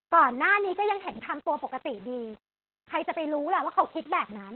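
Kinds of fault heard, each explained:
Low bit depth without dither: The speech has a grainy, rough distortion that follows the signal rather than sitting under it as steady hiss. Quiet stretches and fading word endings turn gritty and sputter instead of decaying smoothly. The error sits around 30 dB below the signal, which fits a signal likely reduced to about 7 bits and rounded with no dither. Without dither the rounding error stays tied to the waveform, so it sounds like distortion rather than noise.
Opus voice compression: The voice sounds muffled, hoarse and slightly robotic, with nothing above about 4.3 kHz, so sibilants and consonant detail are dull and boxed-in. This is heavy damage from the Opus codec in its SILK voice mode. SILK models speech with linear prediction and codes the excitation coarsely in 20 ms frames. The narrowband cut-off and the rough, buzzy texture point to a very low bitrate, around 8 kbps.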